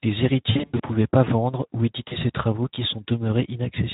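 Throughout, the speech sounds hoarse and grainy, with a noisy edge. This is Speex codec damage, plainly audible and consistent with a bitrate around 11 kbps: the CELP coder has too few bits to model the excitation, so fine detail is replaced by coarse, noise-like texture.

From 0.51 to 0.81 s, just before "pas vendre ou", the sound smears into a stretched, fading tone or noise, then recovers weak and distorted. This is VoIP packet loss concealed by the speech codec. About 200 ms of audio went missing across roughly 280 ms, in runs up to 80 ms, and the decoder stretched its last pitch and filter with falling gain. A shorter dropout at 2.07 to 2.17 s, between "pas vendre ou" and "ses travaux qui", loses 40 ms and leaves a brief stretched blur.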